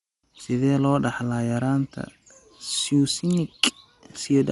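From start to end, the speech sounds dull and plainly coded, with a rough, fluttering haze around voiced tones. On a spectrogram, energy stops abruptly at about 11.4 kHz, and the region below shows patchy, grainy noise where harmonics should be clean. This is likely Dolby Digital compression at a low bitrate, consistent with 64 kbps. The encoder narrowed the band and starved many frequency lines of bits, leaving the decoder to fill them with noise.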